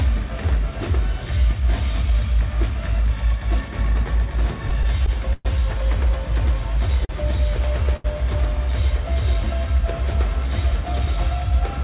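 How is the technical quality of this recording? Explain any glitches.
The recording has audible timing glitches: a burst of stuttering and two separate held sounds. It is band-limited throughout, with nothing above 4 kHz, which fits a G.711 A-law call path at 64 kbps.

From 4.70 to 5.47 s there are repeated stalls (stutter). Packets reached the receiver late or more slowly than playback consumed them, so the jitter buffer emptied four times. Each time, the receiver extended the preceding sound to cover the wait, 147 ms in total and about 19 percent of that span, with the longest fill lasting 116 ms. No audio is lost, but the passage drags and judders rather than flowing.

At 7.05 to 7.11 s and again at 7.96 to 8.06 s there is a short stall from a late packet. In each case a packet missed its playout time, the buffer ran dry, and the receiver stretched the last sound until the packet came in, then resumed from the same point. 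The fills are 42 ms and 79 ms. Nothing is skipped, but a sound hangs on too long, with a faint buzz or dip.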